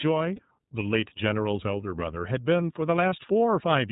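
iLBC codec coding runs throughout the speech, with plainly audible damage: nothing above 4 kHz survives, and the voice has a rough, slightly synthetic edge. Each frame's excitation is coded independently, in a way that fits iLBC's 13.33 kbps mode with 30 ms frames.

Lost iLBC frames occur at 0.36–0.39 s and again at 3.09–3.13 s, each about 30 ms of missing audio. The decoder filled each gap by repeating the last pitch cycle blended with noise, heard as a brief held, buzzy vowel, and normal speech resumes almost immediately afterward.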